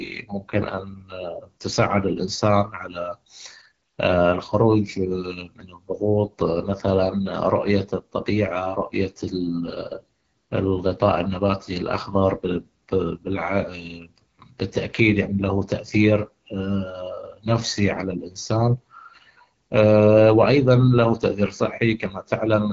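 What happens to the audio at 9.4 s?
At 9.4 s the speech carries the AMR wideband (HD Voice) codec damage heard throughout: a low-rate vocal tract model makes it plainly rough and raspy, pointing to about 8.85 kbit/s. A spectrogram shows noise-filled bands near 6.4 to 7 kHz and nothing above 7.5 kHz.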